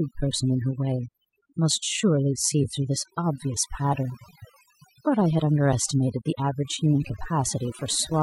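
Overdone noise removal runs through the whole recording: the noise reduction was set so aggressively that any frequency band near its noise estimate gets pulled far down or cut entirely, taking quieter parts of the speech with it. Between phrases the background drops to near silence scattered with twinkling specks.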